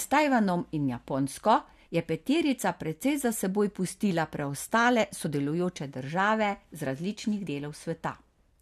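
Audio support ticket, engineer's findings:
Short glitches in the speech at 5.25 s and 7.46 s, each under 20 ms. Probable component: decoder input, with damaged data in the compressed stream. Corrupted bytes in those frames cause misreads or rejected frames; the decoder loses sync and hunts for the next frame header, producing the brief glitch. Two isolated events, consistent with localized stream corruption.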